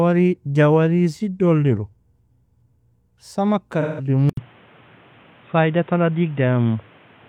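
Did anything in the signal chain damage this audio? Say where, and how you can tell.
Yes, at the codec and at the input stage.

AAC frame loss with concealment occurs from 3.81 to 4.08 s, in the codec and transport path. For about 170 ms, a span that fits roughly four lost frames, the sound turns smeared and noisy instead of dropping out. With no real data, the decoder rebuilt each missing frame from the last good spectrum, keeping its energy but randomising the fine detail. That produces a hazy patch where the real signal should be.

From 4.29 s to the end, the sound turns dull and boxy, with nothing above 3.8 kHz. This is most likely an input switched to a poorer device, at the driver or input-selection stage. An 80 ms silence marks the changeover. Afterwards a new noise floor, about 35 dB below the signal, sits under the audio while the overall level stays roughly the same. The band limit, the new hiss and the gap together point to a narrower-band microphone or headset profile replacing the original input.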